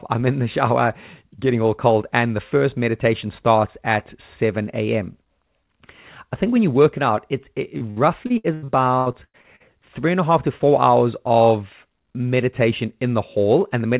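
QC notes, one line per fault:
7.78–9.62 s, repeated packet loss (robotic sound): over this stretch the speech breaks up into 11 short holes, the longest about 100 ms, totalling roughly 560 ms, each papered over by extending the last received sound, so about 30% of the span is concealment rather than real signal. The rapid alternation of genuine and synthesised fragments gives the choppy, robotic quality. The surrounding band-limit near 4 kHz points to a G.711 mu-law call path.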